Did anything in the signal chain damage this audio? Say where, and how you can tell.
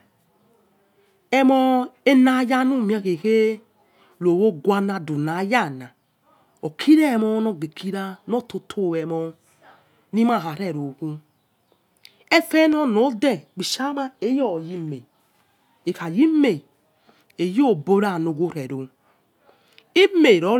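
Yes, there's a single loud pop at 12.73 to 12.75 s, a sharp 20 ms spike sitting a few dB above the speech, which carries straight on underneath. That's likely a voltage transient in the analogue wiring, a plug, switch or static discharge, shaped by the circuits downstream.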